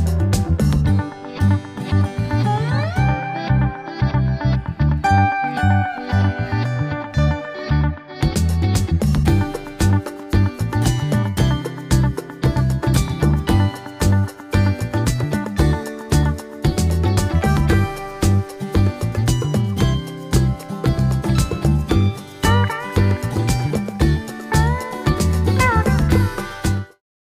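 Nothing stood out on listening, and the level simply eases away smoothly over the last half second or so, ending at about 27.02 s.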